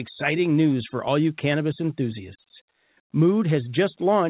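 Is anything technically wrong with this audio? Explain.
No, nothing is technically wrong with this speech clip. It has come through a call path whose band stops at about 4 kHz, which fits a narrowband G.711 mu-law codec, and that path is working as it should.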